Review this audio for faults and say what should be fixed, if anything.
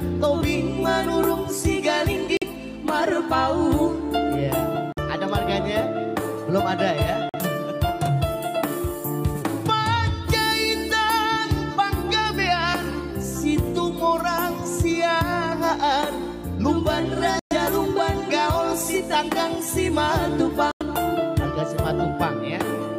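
Audio packets likely missed their deadline on the wireless link, a Bluetooth dropout, cutting abrupt silent holes at 2.37, 4.93 and 7.29 s (46 ms each), 17.39 s (116 ms) and 20.71 s (93 ms), with the sound resuming as though it had played on. Keeping the headphones close to the source, with a clear line of sight and little competing 2.4 GHz traffic, should prevent the gaps.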